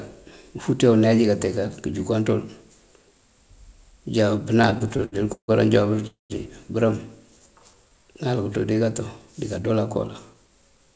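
From 4.58 to 5.51 s the speech shows repeated stalls (stutter): twelve short gaps where packets arrived late and the receiver stretched the last sound. About a third of that span is filled in, the longest gap 151 ms, so the audio drags without losing anything.

At 6.07 s a call audio freeze sets in. A buzzy or hissy continuation fades into 150 ms of silence, 229 ms in all, likely from packets held up in transit. The speech then resumes where it stopped.

From 7.39 to 7.94 s a jitter buffer slow-down plays the audio at 84% speed. Repeated pitch periods add 94 ms, drawing sounds out at unchanged pitch.

From 10.34 to 10.91 s a jitter buffer speed-up runs at 110%, trimming about 70 ms of pitch periods to shed excess delay, so the speech sounds hurried.

Throughout, the audio has no content above 8 kHz, which fits a wideband call codec such as G.722.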